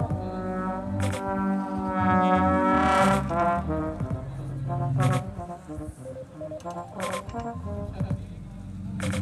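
Throughout, a doubled audio track: a second, equally loud copy trails by about a tenth of a second, likely from a slower capture path, showing as repeated waveform onsets.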